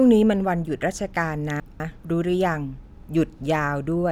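Around 1.6 to 2.0 s the speech jumbles briefly: chunks out of order. A 200 ms chunk turns up one chunk late, so two neighbouring 200 ms pieces play swapped. Nothing's missing, but that stretch sounds scrambled, with three hard joins.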